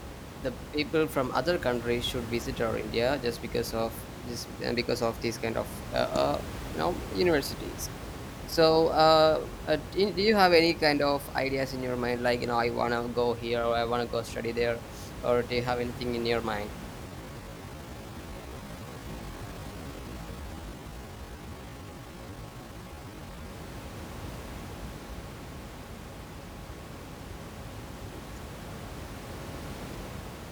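Speech with one time-stretched section. From 17.03 to 23.51 s, after "anything in your mind", the pace suddenly drops to about 0.6 times normal while pitch holds, so it drags. Software likely stretched it to fit a length, with room noise about 13 dB below the speech.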